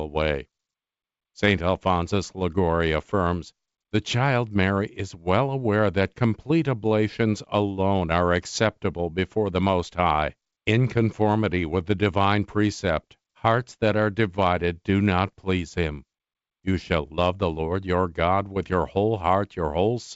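No faults are audible in this speech, which comes through a call codec and jitter buffer with a top end limited to about 7 kHz, fitting wideband G.722 at 64 kbps.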